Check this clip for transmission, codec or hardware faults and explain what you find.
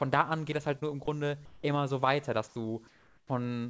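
Two kinds of fault are audible in this speech, which comes through a call path with nothing above 8 kHz. That band limit fits a 64 kbps G.722 wideband codec.

Short concealed packet loss, 0.80 to 0.83 s, between "an geht das halt" and "nur im": about 20 ms of audio never arrived. The receiver extended the preceding sound to fill it, which causes a brief smear. Unlike a dropout, there is no silent gap or hard click.

Comfort noise in place of the background, at 1.45 to 1.63 s (just before "so weiter"), 2.47 to 2.55 s (just after it), and 2.87 to 3.29 s: the likely cause is discontinuous transmission. The natural background, about 30 dB below the speech, gives way to a flat synthetic hiss that is about 6, 2 and 5 dB quieter respectively. A noise gate would leave near-silence, but here the noise remains and loses its texture.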